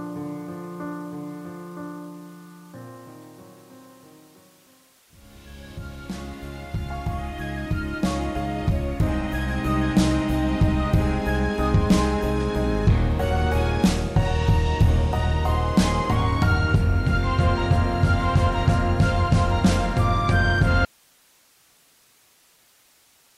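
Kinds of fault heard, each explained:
Audio dropout to a faint residue: The wanted signal was likely lost somewhere upstream while the rest of the chain stayed live, so nothing switched off cleanly. At 20.85 s the sound cuts out abruptly in mid-flow rather than pausing or fading, and it never returns before the clip ends. What fills the remaining two and a half seconds is only a bed of hiss, sitting roughly 35 dB below the level the signal had before the break.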